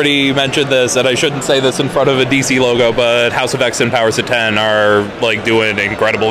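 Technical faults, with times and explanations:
Throughout: hard clipping, heard as brief crackle on the loudest peaks, not a constant fuzz. The level runs about 2 dB past what the stage can pass, so roughly one sample in a hundred has its top sliced flat, adding high harmonics.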